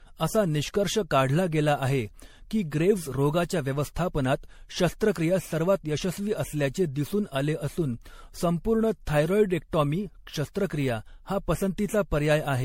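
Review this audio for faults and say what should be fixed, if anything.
Throughout, the speech sounds swirly, smeared and hollow, with blurred attacks and nothing above 16.5 kHz. This is likely generation loss: repeated MP3 re-encoding, roughly seven passes, consistent with 64 kbit/s. Keep a lossless master and encode to MP3 only once, at the final step.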